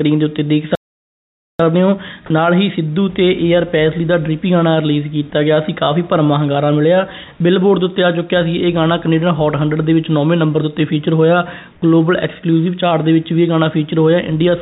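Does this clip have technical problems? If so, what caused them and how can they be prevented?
Yes. Playback stall at 0.75 to 1.59 s: the sound drops to silence for about 0.84 s in mid-flow, then resumes. The likely cause is the player's buffer running dry or its thread being blocked. A deeper playout buffer and a high-priority audio thread prevent this.

Comfort noise in place of the background at 11.72 to 11.82 s: for 100 ms, the real background, about 33 dB below the loud parts, becomes a smoother synthetic noise about 3 dB quieter. Discontinuous transmission likely paused sending, and the receiver synthesised noise. Disabling discontinuous transmission prevents this.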